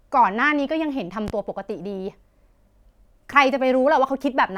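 At 1.28 s a loud pop cuts across the speech and is gone by 1.31 s. It is a single sharp pop. It stands a few decibels above the level of the talking. The cause is likely a sudden voltage pulse entering the signal chain, from a plug, a switch, static or a driver glitch. The following circuits shaped that pulse. The speech carries on underneath, unbroken.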